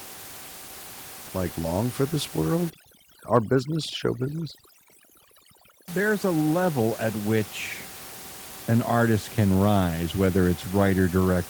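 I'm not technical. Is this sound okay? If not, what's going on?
No. From 2.7 to 5.9 seconds, overdone noise removal kicks in: a cleanup tool set far too strong erases anything it mistakes for background hiss, including softer parts of the voice. The room goes eerily silent with twinkling specks.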